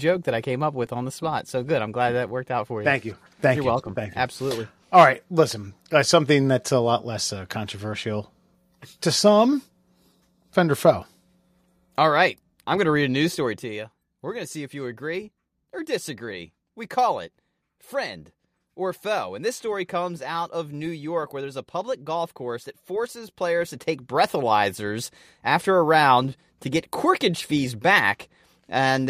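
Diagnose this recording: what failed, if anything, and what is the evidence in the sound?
Zipper noise from 13.38 to 13.80 s, at the gain stage in the buffer path: a level drop of roughly 10 dB arrives as around fifty tiny clicks a second, one per block, giving a ticking texture.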